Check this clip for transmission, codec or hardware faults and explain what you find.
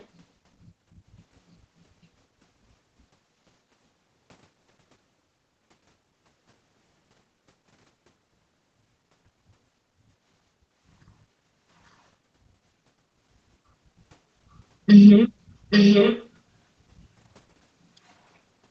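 One fault turns up: echo leak, in two spots. A barely audible blip runs from 0.00 to 0.04 s, then a much stronger one from 15.7 to 16.28 s, nearly as loud as the speech. Both times a copy of the speech returns about 0.84 s late. The likely cause is a far-end loudspeaker whose echo canceller let its own pickup slip back into the call. The top end stops at 8 kHz, as expected for this call path.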